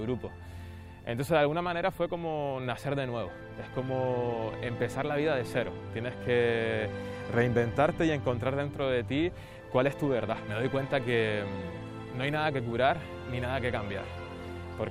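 No technical faults can be heard anywhere in the audio. Nothing in it calls for a timestamp or points to a problem in how the sound was captured, processed or delivered.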